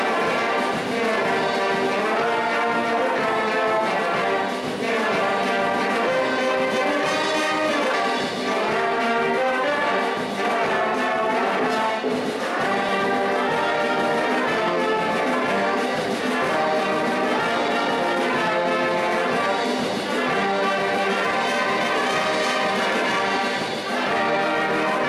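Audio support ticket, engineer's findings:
Forward jumps in the sound at 7.94 s (roughly 300 ms lost), 12.89 s and 21.25 s (about 100 ms each), no gaps. Likely dropped buffer (overrun): capture data overwritten before being read.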